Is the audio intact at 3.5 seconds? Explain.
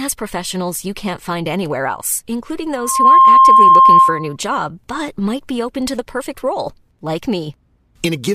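No. From 2.76 to 4.36 s, right after "find anywhere else including" and ending before "but might be open", there is a loudspeaker feedback squeal. The microphone is re-amplifying its own loudspeaker, and at 1.1 kHz the loop gain tops one, so that tone swells within roughly a third of a second to about 15 dB above the speech. A spectrogram shows one bright horizontal line at 1.1 kHz; the waveform's envelope balloons into a dense steady oscillation.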